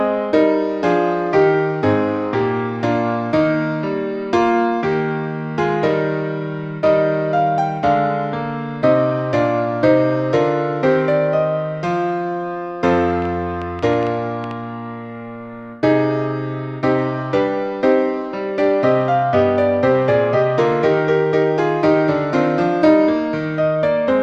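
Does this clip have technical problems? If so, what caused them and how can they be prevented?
Yes. A train of clicks runs from 13.22 to 14.52 s: about ten similar sharp pulses at an uneven pace, roughly 7.8 per second, peaking about 5 dB above the sound. The likely cause is interference from nearby equipment or a faulty connection or power supply injecting brief spikes into the signal path. To prevent it, keep phones and switching power supplies away from cables and the interface, and use a stable, properly powered interface with good connections.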